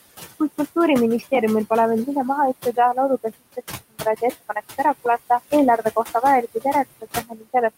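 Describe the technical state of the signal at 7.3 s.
At 7.3 s the sound falls inside a stretch of speech cut by the noise suppressor, running from 7.28 to 7.46 s. The suppressor has mistaken part of the speech for steady background and pulled it down by as much as about 15 dB, so it sounds swallowed and faint for roughly a fifth of a second. On a waveform the envelope collapses abruptly rather than decaying naturally. A spectrogram shows the speech energy, especially the weaker upper bands, thinning out to near the noise floor in that window.

The same moment also carries the noise suppressor artifacts present across the whole clip. Band-by-band gain reduction of about 17 dB on what the suppressor treats as noise makes the leftover background sink between the words and rise under them. The room noise, sitting about 16 dB below the speech, shows up on a spectrogram as a patchy, blotchy floor that sinks between syllables instead of a smooth, even haze.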